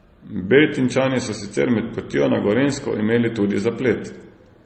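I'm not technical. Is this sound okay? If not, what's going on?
No. The speech was likely squeezed by one compression format and then re-squeezed by another, transcoding between lossy codecs, so both sets of smearing and dullness stack up throughout.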